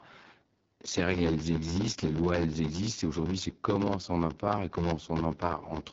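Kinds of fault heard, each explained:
Block size mismatch (padded): each 512-sample block read downstream is only partly filled, the rest padded with silence. This gives a steady buzz at about 86 Hz, and the speech runs at roughly 0.86 of normal speed with its timbre kept.
AMR wideband (HD Voice) codec: the speech passes through the AMR-WB model of pulse excitation and vocal-tract filtering, with nothing above 7.5 kHz. The damage is plainly audible, a rough, raspy texture that fits one of the lowest modes, around 8.85 kbit/s.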